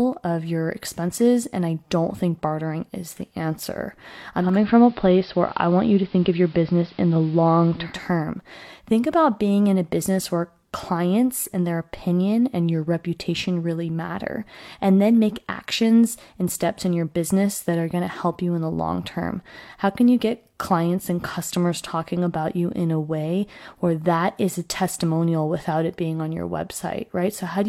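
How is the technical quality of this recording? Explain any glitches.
The recording has one clear glitch. From 4.37 to 8.0 s, just after "bartering is the answer", the speech dulls, hiss sits roughly 30 dB down, and the level shifts by about 3 dB. The cause is digital radio blending to analogue: the receiver lost the digital stream and cross-faded over 257 ms to the station's AM broadcast.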